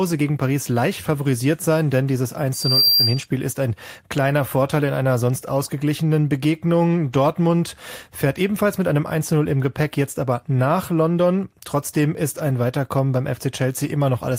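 From 2.53 to 3.26 s a loudspeaker feedback squeal breaks through the speech. The microphone is picking up the loudspeaker it feeds, and at 4.7 kHz the loop gain climbs past one, so that frequency reinforces itself. It swells over about a third of a second into a piercing whistle, ending up around 5 dB louder than the speech. On a spectrogram it appears as a single bright horizontal line at 4.7 kHz. The waveform shows a rising envelope that swamps the speech.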